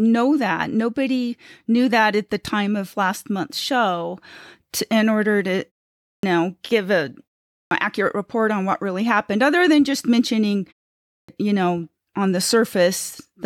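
Three times the speech resumes abruptly out of silence with its onset missing: at 6.09 s, after a pause of about 0.46 s, roughly 142 ms is swallowed; at 7.55 s, after 0.35 s of silence, about 161 ms; and at 11.13 s, after 0.49 s, about 155 ms. This is a clipped start after a pause. The output device went to sleep during the silences and needed time to wake or re-lock, so the first part of each phrase never reached the output.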